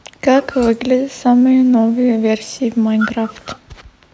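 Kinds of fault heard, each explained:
No technical faults are audible in this speech; it has passed through a call's microphone processing, which as expected trims the lowest bass and leaves nothing above 8 kHz.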